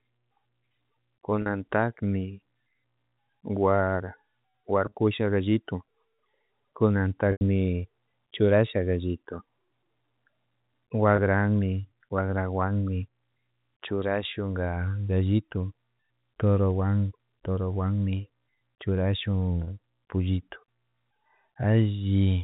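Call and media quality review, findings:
Packet loss with pitch repetition at 1.42, 4.86, 7.32, 11.16 and 19.64 s: brief buzzy held tones from the jitter buffer's concealment looping the last pitch period, 20 to 90 ms each, the 90 ms loss at 7.32 s fading into silence. Gaps fit 10 ms packets. G.711 telephone coding underneath is clean.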